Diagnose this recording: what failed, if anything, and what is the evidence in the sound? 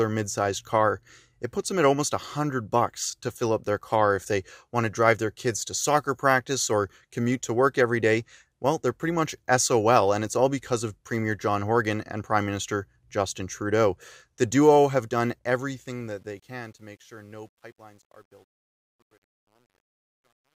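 Truncation distortion on a fade, in the gain or sample-format stage. The fade-out, starting near 15.4 s, turns gritty from 15.44 s. From 16.81 s to 20.59 s it is at its worst. Undithered truncation reduces the quiet waveform to coarse steps, which fits a 10-bit word.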